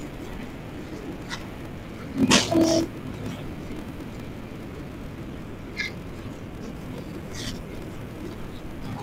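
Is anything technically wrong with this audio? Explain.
Yes. Throughout the speech there is a block size mismatch (padded): each 1024-sample block written is zero-filled to a larger read size, giving a 41.7 Hz buzz and 0.889× speed at normal pitch, unlike a resampling slowdown, which drops pitch.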